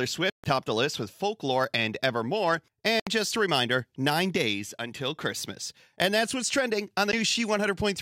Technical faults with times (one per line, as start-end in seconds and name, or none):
0.30-0.44 Bluetooth stall
3.00-3.07 Bluetooth stall
7.12 Bluetooth stall